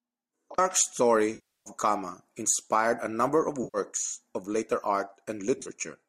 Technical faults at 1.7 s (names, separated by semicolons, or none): AAC frame loss with concealment